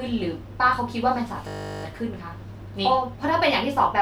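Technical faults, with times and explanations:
1.48 to 1.84 s, system hang loop: the machine stalled while the audio hardware kept replaying the same 20 ms chunk of speech, 18 times over. That fits a 20 ms ring buffer, and repeating it at 50 Hz gives a steady buzz. Hardly any audio goes missing afterwards.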